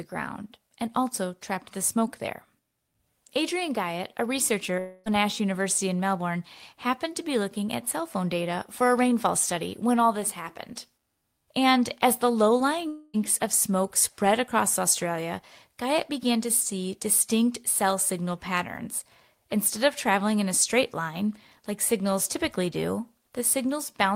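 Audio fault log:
4.79–5.08 s and 12.88–13.16 s, long network dropout: just after "a researcher", and again after "as the low" before "of smoke spread across", the sound turns into a smeared buzz that fades across roughly a quarter second, about 0.26 s each time, with no silent gap. Speech then resumes with that stretch missing. This is likely packets that never arrived, with the receiver stretching the last sound to cover the hole.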